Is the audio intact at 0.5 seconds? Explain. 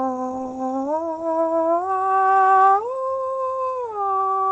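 No, not quite. Right around there, from about 0.43 to 0.47 s, there's a short concealed packet loss. Roughly 20 ms of the music never reached the decoder in time, so the receiver patched the gap by extending the sound it had just played, about 16 ms of it, and then blended back into the real signal. You hear it as a quick smear or tiny wobble, all sitting on the call codec's band-limited sound that tops out near 8 kHz.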